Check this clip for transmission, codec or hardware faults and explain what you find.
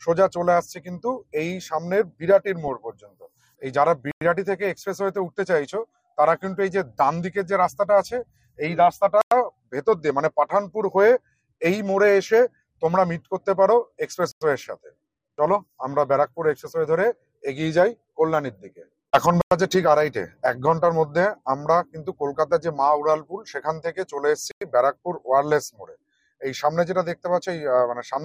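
Two faults are present: a codec degradation across the whole clip and a regular series of short silences.

Throughout, the sound is dull, with a gurgling, granular distortion. The cause is likely MP2 compression at a low bitrate, consistent with about 80 kbps. Starved upper sub-bands switch off and flicker, giving coarse band loss rather than MP3's smeared pre-echo.

At 4.11, 9.21, 14.31, 19.41 and 24.51 s there are 100 ms silences, one every 5.1 s. This is a gap between chunks, likely where each block starts late. Unlike a dropout, no sound is lost; it is only interrupted.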